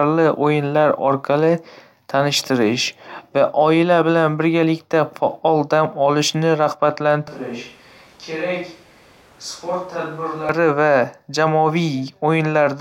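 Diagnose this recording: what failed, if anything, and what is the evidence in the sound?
From 7.28 s to 10.49 s the speech suddenly turns roomy and hollow and loses its low end. It drops by around ten decibels, and the room noise comes up to sit only about 25 dB under the speech. Then it snaps back just as abruptly. That's a switch to a distant microphone at the capture stage. The close mic's feed likely dropped out, so the recording fell back on a mic much further from the source.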